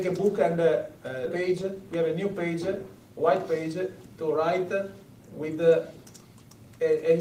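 At 1.25 to 1.27 s the audio jumps forward abruptly, with no silence at the join. The sound after the join follows almost directly from the sound before it, and roughly 0.4 s of material never plays. This is a skip ahead. Later audio was already queued, and a stretch was dropped either in transit or by the jitter buffer when it overflowed. Playback then resumed from the waiting audio, cutting the delay by about the same amount.

Shortly after, from 1.39 to 2.68 s, the sound runs at 108% of normal speed and comes across as hurried, while its pitch stays the same. This is a jitter buffer speed-up. The buffer was holding more audio than its target, so the receiver repeatedly trimmed out short slices of one or a few pitch periods. Together those cuts removed about a tenth of a second, compressing the timing without shifting the pitch.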